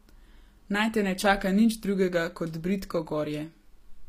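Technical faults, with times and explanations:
Throughout, HE-AAC compression: the treble of the speech sounds bright but synthetic, with s sounds coming out gritty and plainly metallic or lispy, and nothing at all above 15.5 kHz. That's likely this codec at a low rate, which fits something around 24 kbps. Only the lower band is really coded, and the top end is rebuilt by copying lower bands upward under a coarse envelope, so the upper harmonics don't line up with the real ones.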